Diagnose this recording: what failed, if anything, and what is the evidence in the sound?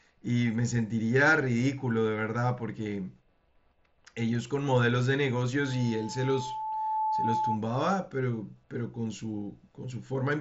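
A loudspeaker feedback squeal appears from 5.60 s to 7.61 s. The failure sits in the acoustic path ahead of capture: the microphone is hearing the loudspeaker it feeds, and at 870 Hz the loop gain passes unity. That tone climbs over about one and a half seconds until it roughly matches the speech level, then stops. On a spectrogram it is a single bright horizontal line at 870 Hz, brightening left to right, sitting well inside the mSBC band that ends near 7.7 kHz. On the waveform the envelope swells steadily.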